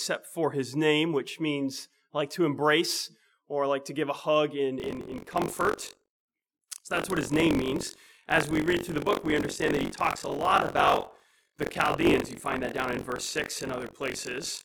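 From about 4.78 s right through to the end, there's buffer tearing: a steady robotic rattle buzzing at roughly 46.9 Hz, which fits a 1024-sample buffer. The writer and the hardware reader have drifted out of step, so each period ends up with about a fifth of its contents being stale audio from around 40 ms earlier. Those hard joins on either side of the old chunk repeat every cycle, and that's the buzz you're hearing.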